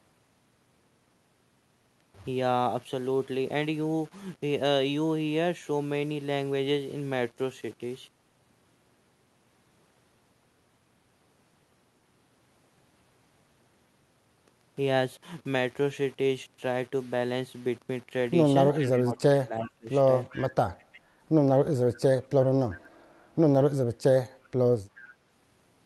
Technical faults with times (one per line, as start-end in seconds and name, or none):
0.00-25.86 low bit depth without dither
18.71-19.89 speech suppressed in double talk
18.93-18.98 echo leak
20.29-20.49 echo leak
20.79-21.00 echo leak